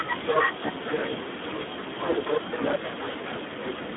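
Speex codec damage runs through the whole clip: the speech is squeezed into a narrow 200 Hz to 3.5 kHz band with nothing above 3.8 kHz, and the heavy coding leaves it hoarse and noisy, which fits a low setting around 8 kbps that starves the excitation.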